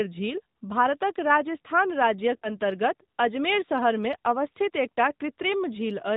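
This is a speech clip that's been through the AMR narrowband mobile codec for its whole 6 seconds. Everything above 4 kHz is gone, so it has that boxy phone-line sound, and the codec damage is plainly audible: the voice comes out buzzy and a bit synthetic because it's rebuilt from a vocal-tract model and a handful of excitation pulses rather than the actual waveform. The degree of roughness fits a mid AMR-NB mode, around 10 kbps. Then, right after "भारतक राजस्थान", from about 2.36 to 2.52 s, you get lost AMR speech frames. It sounds like roughly three frames, about 60 ms, failed at the decoder. The decoder papers over the gap by reusing the last good pitch and filter settings with falling gain, so the sound smears and sags briefly, then comes back weak or rough for a moment before settling.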